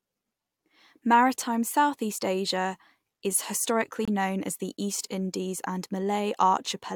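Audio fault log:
4.05–4.08 s, gap between stream segments: the speech drops into a hard-edged hole of silence about 25 ms long, falling right where a 4-second segment ends and the next begins. The second segment's timestamp starts slightly later than the first one finishes, so the player pads the difference with silence. The edges are abrupt because nothing fades across the join. No audio is lost. The speech resumes exactly where it stopped, just shifted later by the inserted time.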